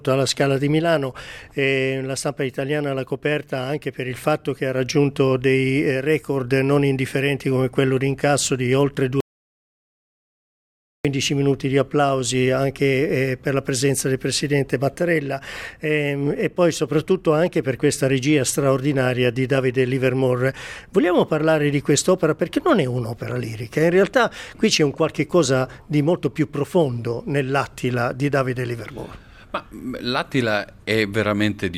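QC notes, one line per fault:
9.20–11.05 s, audio dropout to silence: the sound cuts off mid-flow and goes to silence for about 1.84 s, with no room tone at all, then snaps straight back. Likely the input link dropped or got muted while the recorder kept writing silence, so whatever happened in that gap is simply gone.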